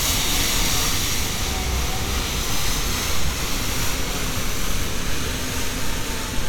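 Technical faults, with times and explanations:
No technical faults are audible at any point in this recording of sounds.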